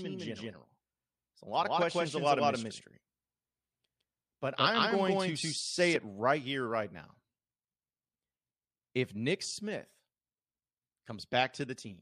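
Speech, doubled from the start until 5.96 s, just before "right here right now": an equally loud, dry copy trails about 150 ms behind and then stops abruptly. This doubled audio track likely comes from the sound being captured a second time through a slower path.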